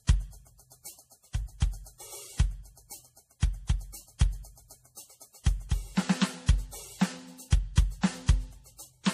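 From start to finish the music carries two layers of codec damage: smeary, swirly highs from a starved MP3-style encode, then AAC's own softening on top, with nothing above 15.2 kHz. That's likely transcoding between lossy codecs, roughly a 40 kbit/s MP3 re-encoded to AAC-LC at 64 kbit/s.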